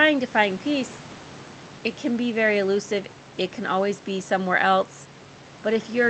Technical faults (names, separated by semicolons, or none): none